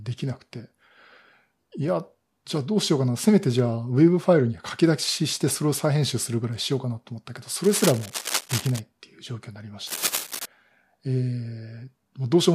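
Cable scratch noise runs from 7.64 to 8.80 s and again from 9.87 to 10.46 s, likely from a worn cable or connector being moved so its contact resistance jumps about, laying ragged scratching bursts over the speech, roughly 10 dB and then 5 dB below it.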